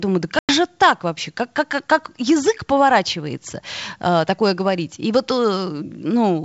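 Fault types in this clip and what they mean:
Packet loss on an ADPCM call: near the start of the speech, about 100 ms of audio drops out into a hard-edged silent gap, which points to roughly ten lost packets. Unlike a simple mute or a plain PCM dropout, the gap leaves the decoder's adaptive predictor and step size out of step with the sender's, so the speech after it does not resume cleanly but needs a brief moment to settle, heard against otherwise clear G.722 wideband sound.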